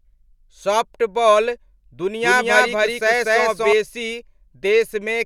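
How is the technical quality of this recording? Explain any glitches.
A doubled audio track runs from 2.23 to 3.73 s: the speech is likely being mixed in twice, with a second copy arriving about a fifth of a second late at roughly equal level. It sounds like a dry, echo-free repeat trailing each syllable, starting and stopping abruptly.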